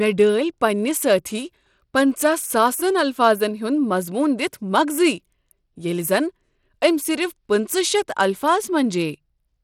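A speech recording with plainly audible codec damage running through the whole clip, likely from Bluetooth SBC compression at a setting that fits roughly 96 kbps. Nothing remains above 17.4 kHz, and the upper bands sound starved, so treble flickers and a gritty grain rides on the voice. Unlike MP3 or AAC artefacts, there is no swirly, underwater smearing. The roughness is coarse and band-wise, with aliasing grit rather than warbling.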